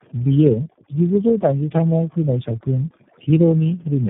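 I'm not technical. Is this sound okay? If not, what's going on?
No, two problems run through the whole clip.

Overdone noise removal: a cleanup tool was set too strong, so the background drops and breaks up into twinkling specks, and softer parts of the speech vanish with it.

Tandem speech coding: the call passed through several phone systems, each squeezing and unpacking the speech again, with four speech coders in a row. Nothing above about 3.6 kHz survives. Compared with one poor phone link, the speech sounds rougher, more muffled and more warbly.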